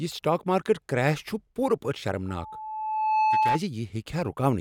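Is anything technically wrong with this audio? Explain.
Yes. From 2.28 s to 3.60 s the speech is overtaken by loudspeaker feedback squeal, a steady tone at 866 Hz. The microphone is picking up the loudspeaker it feeds, and at 866 Hz the gain around that loop exceeds one, so the tone reinforces itself on each pass. It swells over roughly a second into a piercing whistle that ends up a few decibels louder than the speech, then stops at 3.60 s.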